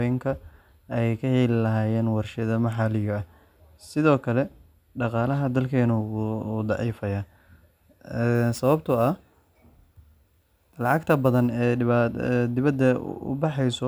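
From 8.35 to 11.49 s, crude rate conversion repeats samples without filtering, which fits a 32 to 44.1 kHz change, adding gritty, inharmonic fizz about 30 dB below the speech.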